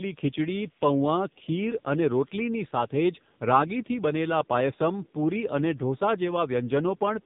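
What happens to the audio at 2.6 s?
At 2.6 s you're hearing the AMR narrowband mobile codec at work, though it isn't tied to that moment; it runs through the whole clip. The speech has been squeezed into a phone-style vocal-tract model, with a few pulses per 5 ms subframe, and nothing gets through above 3.8 kHz. The damage is heavy, so the voice comes out buzzy and synthetic, which fits one of the low AMR-NB modes, around 6.7 kbps.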